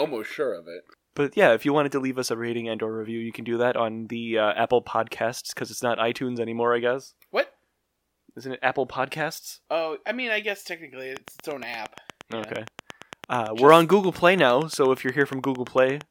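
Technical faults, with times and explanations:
11.17–16.02 s: train of clicks, a regular ticking at 8.67 per second, around forty pulses well above the speech, likely from interference or a struggling interface.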